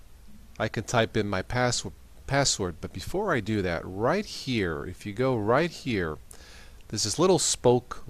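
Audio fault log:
4.43 s: dropped samples, a single sharp click where a couple of samples went missing, likely, making the waveform jump abruptly to a later value.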